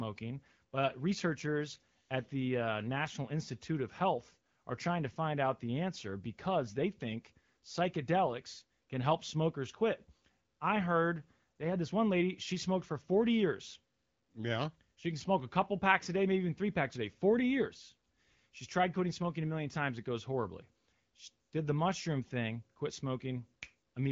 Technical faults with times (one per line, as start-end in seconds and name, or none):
none